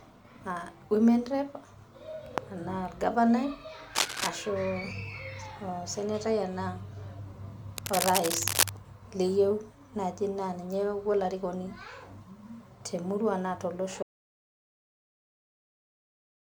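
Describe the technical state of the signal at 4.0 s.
At 4.0 s a burst of cable scratch noise runs from 3.95 to 4.29 s: dense, ragged rustling about as loud as the speech itself. It is likely a worn cable, connector or control being moved, so that the contact resistance jumps about rapidly and injects uneven noise. Unlike a single click or a dropout, it is a cluster of irregular crackle lasting about a third of a second, and the speech continues underneath rather than being cut.

Under that, the whole clip carries generation loss. The speech sounds swirly, hollow and smeared, and consonant attacks are blurred, which is more damage than one encode at this quality would cause. The likely cause is repeated lossy coding, around four passes, which fits MP3 at about 136 kbit/s each time. Every pass requantises on a shifted frame grid, so noise and spectral gaps accumulate. The high end stays present up to about 20.1 kHz, so this is not the dull, band-limited sound of a single low-bitrate encode.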